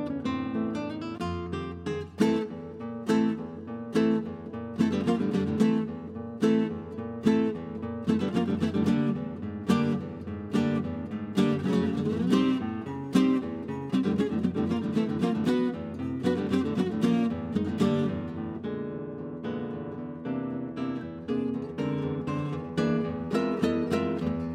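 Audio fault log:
No faults are heard anywhere in this clip. Nothing in the audio calls for an entry in this log.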